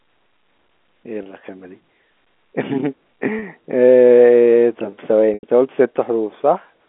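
Packet loss with pitch repetition hits at 1.23 s and 3.39 s (30 ms each) and at 5.34 to 5.43 s (90 ms). The receiver loops the last pitch period to fill each gap. The short gaps sound like a brief buzzy hold, and the longer one fades before speech cross-fades in.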